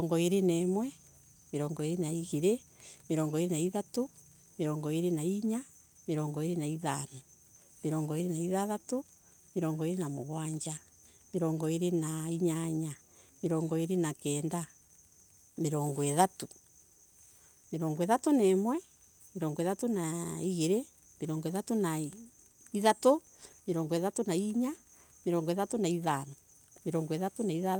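No technical faults can be heard anywhere in the recording; the signal stays continuous and steady throughout.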